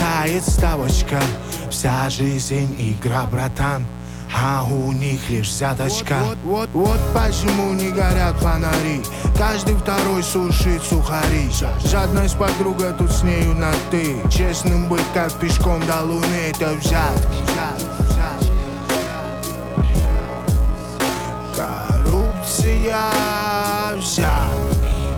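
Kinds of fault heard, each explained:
Mains buzz: Throughout the clip there is a steady, raspy buzz sitting not far below the level of the sound itself. Its spacing points to 60 Hz mains. Sharp current spikes from switching, twice per mains cycle, leak into the signal path, perhaps through a dimmer, a rectifier or a missing shield. Because the spikes are so abrupt, the 60 Hz harmonics stack up into the kilohertz range and give the tone its rasp.
Time-stretched section: From 18.46 s to the end, the pace suddenly drops to about 0.59 times normal speed while the pitch stays put. The passage drags. The likely cause is software lengthening this part to fill a set duration. It holds the pitch by repeating short slices of the audio.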